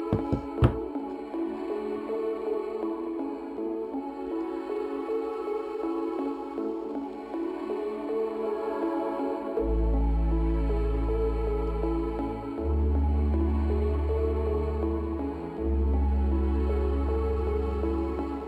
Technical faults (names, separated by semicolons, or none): imaging from linear upsampling